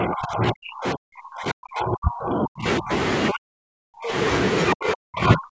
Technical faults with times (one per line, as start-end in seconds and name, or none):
0.00-2.91 speech suppressed in double talk
3.30-4.14 speech suppressed in double talk
4.73-5.53 speech suppressed in double talk